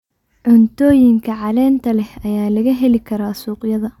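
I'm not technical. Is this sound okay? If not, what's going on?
Yes, no technical faults are audible anywhere in this recording.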